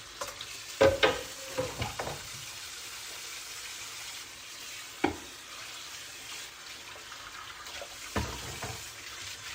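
Nothing in this recording of sounds stood out as a technical problem on listening.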